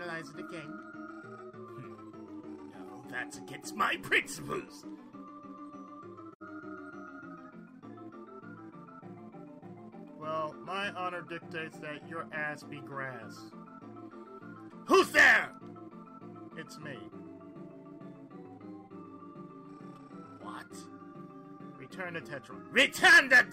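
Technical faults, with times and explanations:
6.32–6.42 s, AAC frame loss with muting: the sound drops out into a short, soft-edged hole. About 85 ms of audio is missing, which fits two lost frames. The decoder had no data for those frames, so it set their spectrum to zero. The overlapping transform windows on either side then fade the sound down into the gap and back up out of it. That makes a smooth dip rather than a hard cut.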